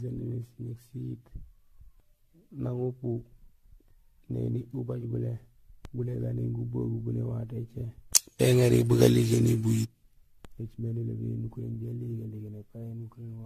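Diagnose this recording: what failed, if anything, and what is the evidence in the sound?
Throughout, the speech sounds swirly, hollow and smeared with blurred attacks. This is likely codec-stage generation loss: about ten AAC-LC re-encodes, each requantising on shifted frames.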